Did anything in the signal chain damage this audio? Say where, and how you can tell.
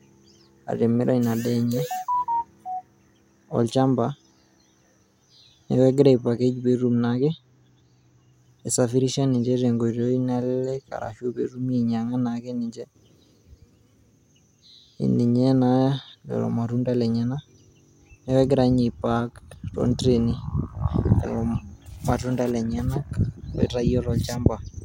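Yes, there's channel delay (comb filtering) from 6.79 to 8.33 s, when the speech goes dull up top. One channel arrives a couple of samples late, a tiny fraction of a millisecond, before the mono sum, probably a buffer offset, cutting the first notch around 10 kHz.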